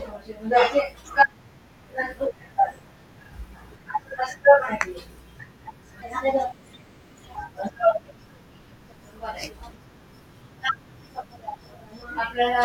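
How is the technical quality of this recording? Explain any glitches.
One glitch stands out: a section at the wrong speed from 6.02 to 7.36 s. For that stretch the speech runs about 1.26 times too fast, so pitch and pace rise together, roughly four semitones higher, and the voice turns thin, chipmunk-like and hurried before dropping back to its normal register. The likely cause is that this segment was played or rendered against the wrong clock rate, stretching neither time nor pitch independently but shifting both at once.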